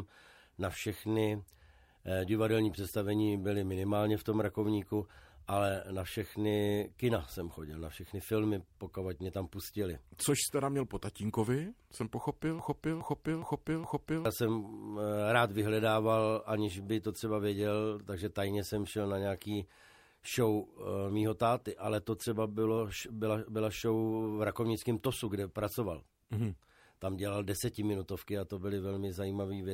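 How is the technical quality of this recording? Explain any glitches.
There is one clear glitch, a broken-record loop from 12.59 to 14.25 s. In that stretch a fragment about 415 ms long plays four times in a row, identical each time and butted together with no gap, so the sound sticks and stutters mechanically instead of moving forward. The likely cause is a stall in the player, encoder or stream that kept resending the last chunk it held. Whatever audio belonged in those 1.7 seconds is gone.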